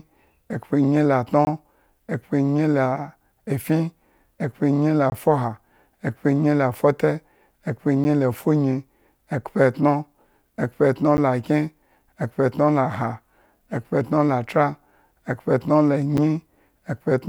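Blocks of digital silence fall at 1.45 to 1.47 s and 5.10 to 5.12 s (20 ms each), then at 8.04 s, 11.17 s and 16.17 s (about 10, 10 and 8 ms). Each time, a run of samples drops straight to silence and returns with no fade, as when the output buffer isn't filled in time. The abrupt edges make the shorter gaps sound like ticks, while the 20 ms ones are brief holes.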